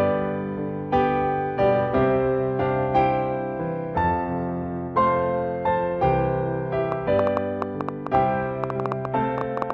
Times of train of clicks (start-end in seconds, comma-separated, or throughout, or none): 6.92-9.71